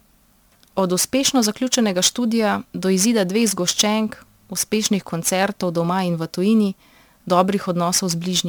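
Crude rate conversion runs throughout this speech clip. A gritty, inharmonic fizz trails the louder and brighter sounds, which points to a 48 kHz to 44.1 kHz change made by simply dropping samples without filtering. The periodic errors form unrelated tones, roughly 20 dB below the speech.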